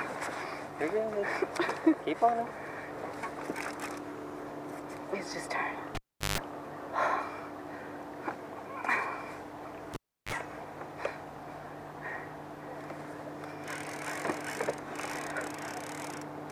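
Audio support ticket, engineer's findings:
Cable pulled and plugged in, 5.95–6.38 s and 9.94–10.33 s. Pop, dropout (381 ms, 338 ms), then 50 Hz buzz (150 ms, 34 ms) as the tip touches, second pop. Waveform: spike, flat gap, spike. Spectrogram: harmonic stack at 50 Hz multiples. Live cable pulled out and pushed back in.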